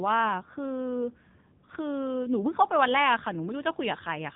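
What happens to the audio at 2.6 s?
At 2.6 s the speech carries the AMR narrowband mobile codec damage present through the whole clip. The codec rebuilds the voice from a vocal-tract model excited by sparse pulses in short frames, so nothing above 3.8 kHz survives and the voice comes out heavily buzzy and synthetic, which fits a low bitrate around 6.7 kbps. A plain telephone-style low-pass would lose the same top end but keep the voice natural, without this artificial buzz.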